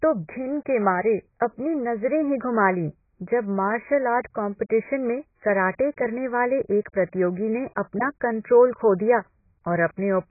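From start to finish the speech sounds dull and smeared, with nothing above 2.5 kHz and a warbling, swirly texture on sustained sounds. This is heavy AAC compression, likely at a bitrate around 12 kbps. Unlike a plain low-pass filter, the remaining band itself gurgles and has holes.

At 4.23 s a short hiss of about 10 ms arrives just before a sharp onset, softening the attack. This is pre-echo: the codec spread noise meant for the loud attack across its whole block. Unlike reverb or a click, the smear comes before the attack, not after.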